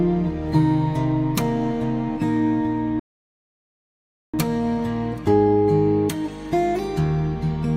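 A rebuffering stall interrupts the audio at 2.99 s: playback drops to silence until 4.34 s, then resumes exactly where it stopped. The player exhausted its downloaded buffer and waited for more data, so nothing is lost, but 1.34 s of dead air is added.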